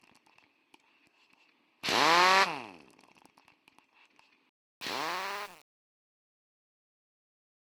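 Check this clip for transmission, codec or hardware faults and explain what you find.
One fault turns up, in the closing fade. From 4.49 s to 7.70 s the sound turns gritty and grainy as it dies away instead of thinning out cleanly. This is truncation distortion on a fade. The fade-out itself starts at around 4.5 s, but the stage applying it kept too few bits and added no dither. The coarseness points to something like a 7-bit word length. As the level falls toward the smallest step, the waveform collapses into a few square steps, which produces the rough tail.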